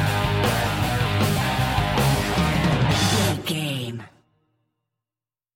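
No dropouts, clicks, distortion or level jumps turn up anywhere in the audio, and no faults are present.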